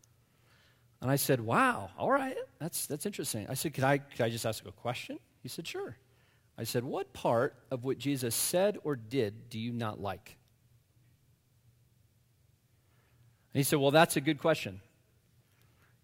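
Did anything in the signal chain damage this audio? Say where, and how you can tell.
Yes. From 3.22 to 8.52 s this speech picks up a gritty, inharmonic fizz riding on the louder and brighter sounds. That's crude rate conversion: unfiltered nearest-sample dropping, which fits a 48 kHz to 44.1 kHz conversion, leaves an error only about 20 dB down.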